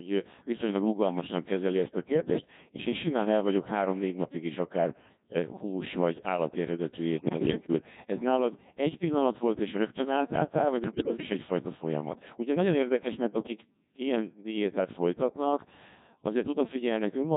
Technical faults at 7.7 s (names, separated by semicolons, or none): Codec 2 vocoder; bit errors on digital voice radio